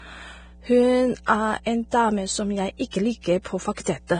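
Right from the start there's mains hum under the speech: a steady 60 Hz tone sitting about 25 dB below the talker, there the whole way through. That's the power line leaking into the signal path, most often through a ground loop or a transformer sitting close to the gear. The tone never changes level or pitch, so it reads as a constant low drone. You might pick up a little of its second harmonic at 120 Hz, though the 60 Hz fundamental is the main thing.

Also running throughout is heavy codec damage, likely from Vorbis compression at a low setting. Nothing survives above 9.7 kHz, so the top end just stops. Below that, the treble has been quantised so coarsely that the fine detail has turned into grainy, hissy noise, and the voiced tones sound roughened. That pattern points to a low bitrate, somewhere around 23 kbps.

That same coding produces pre-echo in five places. The first runs from 1.25 to 1.28 s, right before "er en". 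The second runs from 2.91 to 2.93 s, just after "som jeg". The other three fall at 3.21 to 3.24 s, 3.42 to 3.45 s and 3.74 to 3.77 s. Each one is a smear of hiss lasting 22 to 33 ms that arrives ahead of a sharp onset. It happens because the codec spreads its quantisation noise across the whole transform block, so the quiet moment before the attack gets noise sized for the loud part. The attacks come out softened as well.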